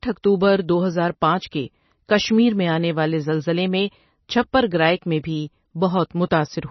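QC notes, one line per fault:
Throughout, MP3 compression, likely: the speech has nothing above about 5.9 kHz, so the top end sounds dull and boxed in, with heavy watery, swirly smearing where weak frequency lines flicker on and off between frames. The s sounds go chirpy and metallic, and consonant attacks blur. That much damage and that low a treble cut point to a starved encoder, fitting a bitrate down around 24 kbps.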